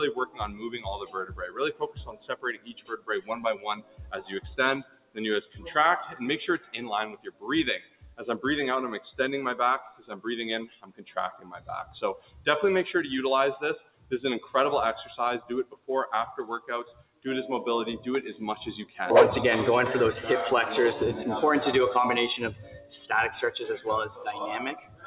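A speech-oriented noise suppressor runs on this sound throughout, treating sustained content as noise, so levels pump by roughly 15 dB and tails thin out.

Sound cut by the noise suppressor occurs at 0.26–8.21 s, 9.83–12.47 s, 13.81–14.54 s, 15.4–15.89 s, 16.6–17.26 s, 22.54–22.92 s and 24.15 s to the end. Held and decaying parts sink by about 15 to 18 dB while onsets survive.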